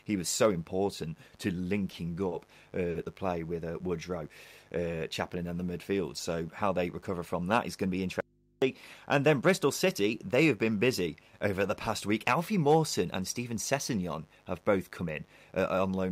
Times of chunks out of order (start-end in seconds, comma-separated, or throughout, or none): none